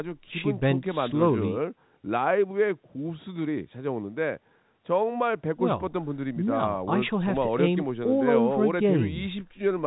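There are no technical faults in this speech recording to describe in time order.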